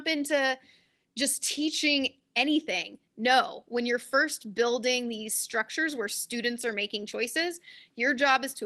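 Nothing stood out on listening to this speech recording as it came through the call path.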